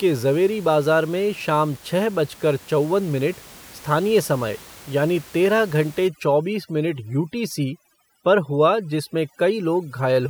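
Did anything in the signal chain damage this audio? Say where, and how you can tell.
Yes. Overdone noise removal in call processing from 6.08 s, after "तेरह घंटे", to the end. Aggressive band gating breaks the background into warbling specks, and the spectrogram shows holes speckled with isolated twinkles.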